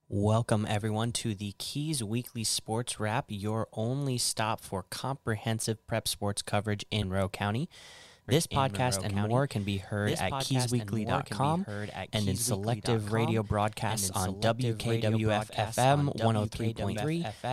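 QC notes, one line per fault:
7.01 s, damaged data in a compressed stream: just after "prep sports coverage" a brief glitch lasts about 20 ms. A corrupted stretch of the compressed stream left the decoder unable to parse those frames, so it lost sync and hunted for the next valid frame header. Unlike a dropout or click from the playback chain, the blip comes from the decoder losing its place in the coded data.
8.28 s to the end, doubled audio track: from 8.28 s a second full-band copy of the speech runs roughly two seconds behind the original, somewhat quieter, at about 5 dB down, and continues to the end of the clip. It starts abruptly, with no build-up. The copy carries no decay and no room colouring, which separates it from a real echo or reverb tail. The likely cause is the same audio being captured a second time through a slower path and mixed back in.
16.95 s, damaged data in a compressed stream: a second short glitch near 16.95 s, about 14 ms long. 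Bad bytes in the compressed data again made the decoder discard frames and resynchronise. It is heard over the doubled copy still running, but it is a single coded blip, not a repeated copy of earlier sound.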